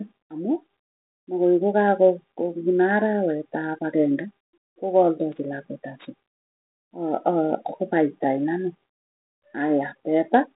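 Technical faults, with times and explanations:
No technical faults; the speech sits in a 200 Hz to 3.7 kHz telephone band with light coding texture, which fits G.726 ADPCM at 32 kbit/s working as intended.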